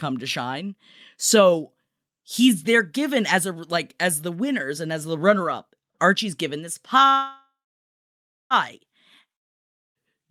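At 7.09 s, after "given this", a call audio freeze: the last sound decays into about 1.0 s of silence, then resumes at 8.53 s without loss, likely from a starved jitter buffer.

At 9.36 s, a long network dropout brings a brief fading tail and then silence until 9.98 s. About 0.6 s of audio is gone, likely lost in transit.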